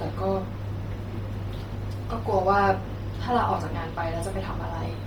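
Speech with heavy codec damage throughout: a breathy, grainy upper edge and nothing above 20.2 kHz, likely from Bluetooth LC3 compression at about 32 kbps.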